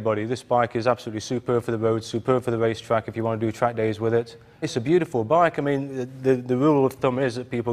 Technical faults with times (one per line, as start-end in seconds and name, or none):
none